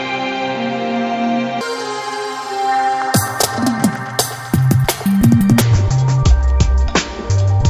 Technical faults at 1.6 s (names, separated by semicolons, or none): wrong sample rate